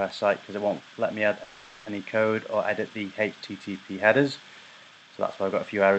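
From 1.43 to 1.87 s the last sound stretches into a fading buzz, a call audio freeze likely from delayed packets; unlike a dropout, audio then resumes exactly where it stopped.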